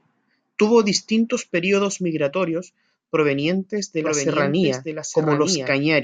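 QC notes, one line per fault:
4.04–6.03 s, doubled audio track: after "períodos migratorios provenientes de", a dry, somewhat quieter copy cuts in about a second late until the end, likely from a second, slower capture path.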